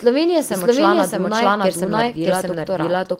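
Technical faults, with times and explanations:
Throughout: doubled audio track. A second full-band copy of the speech runs about seven tenths of a second behind the first, at roughly the same loudness. It has no decay and no room colour, so it sounds like a flat overlapping replay, not an echo. Each word returns intact and clashes with later words. This likely comes from the sound being captured twice over a slower second path, or an edit holding two copies out of step.
1.78 to 2.87 s: call bitrate drop. The speech turns rough and watery, and the top end dulls. The call's bandwidth estimate fell, so the encoder was told to spend far fewer bits. The sound points to a fall from about 32 to 17 kbps. It stays at its worst for about 1.02 s. With so few bits, detail is coded coarsely and high frequencies are trimmed. Clarity returns once the rate recovers.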